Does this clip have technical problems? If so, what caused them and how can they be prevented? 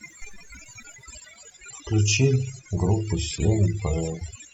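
Yes. Overdone noise removal runs throughout the speech. Too-strong noise reduction cuts quiet bands near its noise estimate, leaving twinkling specks. Use gentler reduction settings.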